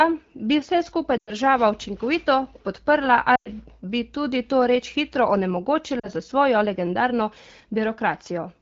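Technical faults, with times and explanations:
1.17 to 1.31 s, lost AMR speech frames: right after "bi vse skupaj" the speech smears and fades for 100 ms, about five 20 ms frames, as the decoder repeats its last good settings.
3.35 to 3.49 s, lost AMR speech frames: another 100 ms stretch drops to near silence within two frames, because the decoder extrapolates from old frames with falling gain.
5.99 to 6.08 s, lost AMR speech frames: a shorter 40 ms drop toward near silence, fitting about two lost frames, and the speech returns briefly weak through the 12.65 kbit/s wideband codec.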